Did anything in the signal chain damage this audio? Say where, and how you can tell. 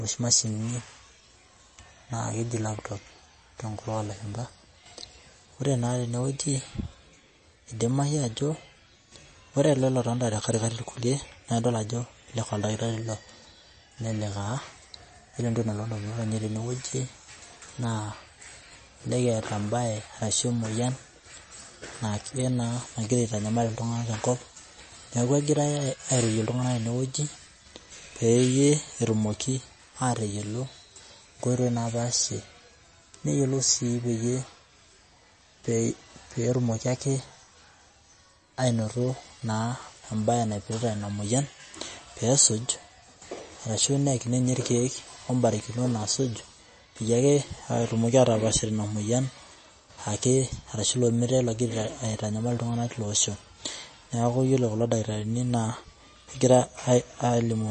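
Yes, at the codec stage, throughout the speech. Nothing sounds above 8.3 kHz, and the sound is watery and swirly. That is likely MP3 compression, fitting a starved bitrate near 32 kbps.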